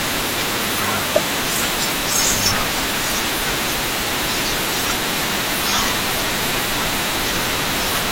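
From 6.33 to 6.89 s the speech picks up DAB burbling. Weak reception lets a bit error rate of around 0.2 percent slip past error correction, so wrong samples put short blips of noise in single sub-bands. It adds noise blips over the speech instead of leaving the silent gaps of a dropout.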